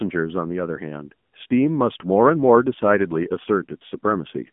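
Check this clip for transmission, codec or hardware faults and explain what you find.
One fault runs through the whole recording. AMR narrowband mobile codec, throughout: speech is rebuilt from a vocal-tract model excited by sparse pulses, at a low mode that fits about 7.4 kbps. Nothing passes above 3.7 kHz, the band sits near 150 Hz to 3.5 kHz, and the voice sounds plainly buzzy and synthetic.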